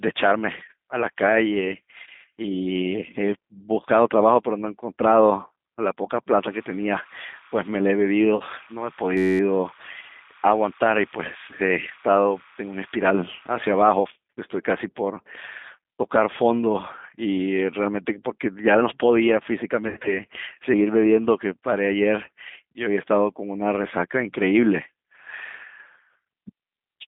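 Throughout the speech, G.729 codec damage is plainly audible: a rough, slightly synthetic quality consistent with an 8 kbit/s pulse-coded speech model. A spectrogram shows a line band of about 150 Hz to 3.6 kHz, with nothing above and smeared, grainy harmonics inside.

From 8.36 to 8.43 s, VoIP packet loss concealment by the speech codec fills a 40 ms gap, which fits two lost packets. The decoder repeats its last pitch and filter, so the sound is briefly stretched and fades. The waveform shows a decaying, oddly regular stretch, with weak audio just after.

At 9.17 to 9.40 s, a system hang loop sets in. The sound hardware kept replaying one 10.67 ms segment, which fits a 512-sample buffer, about 21 times. This is heard as a steady buzz at 93.8 Hz. The waveform shows identical repeating cycles, and the spectrogram shows harmonic lines spaced 93.8 Hz apart. Almost no audio was lost.

From 19.88 to 20.20 s, packet loss concealment returns. 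It covers 120 ms of losses scattered over 160 ms, with an 80 ms run at the longest. This gives a more drawn-out stretched, fading sound and lingering distortion. The spectrogram shows smeared, frozen harmonics that fade away.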